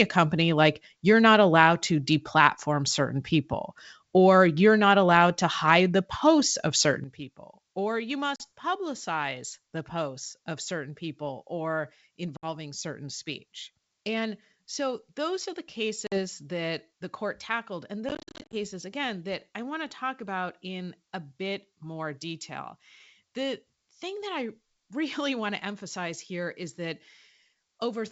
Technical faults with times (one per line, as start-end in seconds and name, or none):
7.04-28.11 sudden gain jump
8.36-8.44 packet loss on an ADPCM call
12.37-12.47 packet loss on an ADPCM call
16.07-16.19 packet loss on an ADPCM call
18.09-18.54 packet loss on an ADPCM call